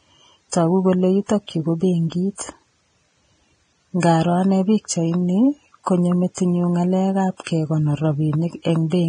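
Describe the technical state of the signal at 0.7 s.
At 0.7 s the speech carries Vorbis compression damage, present across the whole clip: heavily quantised treble turns fine detail into grainy hiss, with nothing above 9.7 kHz, likely from a low bitrate around 22 kbps. A spectrogram shows a flat ceiling and smeared, speckled upper bands.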